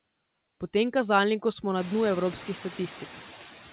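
Noise suppressor artifacts run through the whole speech clip. The suppressor removes only about 6 dB of background, so the noise is thinned rather than gone, dipping in pauses and lifting again under the talker. Once the room noise climbs by about 20 dB at around 2 s, ending only about 19 dB below the speech, more of that residue is left under the voice. The 4 kHz band limit heard throughout fits a G.711 call path.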